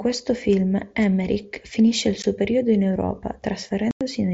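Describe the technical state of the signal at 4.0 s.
Right at 4.0 s you're inside a dropout from unconcealed Bluetooth headset packet loss, running 3.91 to 4.01 s. About 0.1 s of audio between headset and phone never arrived, and nothing patched the gap, so silence or an idle pattern simply fills it. That length fits a run of a dozen or so lost mSBC packets. You hear a sudden hole with hard edges, against the light grain of the mSBC link around it.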